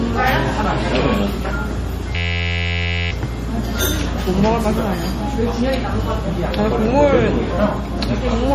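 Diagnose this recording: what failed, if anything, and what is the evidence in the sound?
Two separate problems here. First, a codec-stage issue running through the whole clip: the top end stops dead at 15.3 kHz, and there's a plainly audible watery, swirly quality with smeared transients. That's likely MP3 compression at a low bitrate, something around 40 kbps. The encoder runs out of bits, chops the treble at a fixed cutoff and drops weaker frequency content that flickers in and out frame to frame.

Second, a driver or buffer failure: a system hang loop from 2.16 to 3.11 s. For about a second, the audio turns into a steady buzz at 86.1 Hz. That's one 11.61 ms slice repeating roughly 80 times, which fits a 512-sample ring buffer. The host froze while the audio hardware kept replaying the same buffer, so the loop sits on top of the timeline rather than eating into it, and essentially no audio is lost.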